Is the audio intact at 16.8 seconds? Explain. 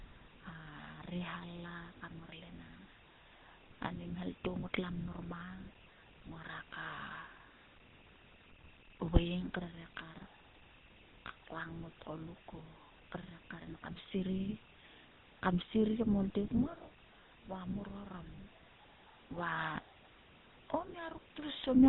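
No. From 16.82 to 16.85 s there are lost GSM frames: a gap the length of a single 20 ms frame, filled by repeating the previous frame's settings. It sounds like a brief rough, metallic ring, and on a spectrogram it shows as a short smeared, flattened patch where the detail stops changing.

The GSM full-rate codec also runs through this moment, at 13 kbps. Its vocal-tract model driven by sparse regular pulses gives plainly audible buzzy, gravelly roughness, and the spectrogram shows nothing above 4 kHz, with a coarse, pulse-striped texture.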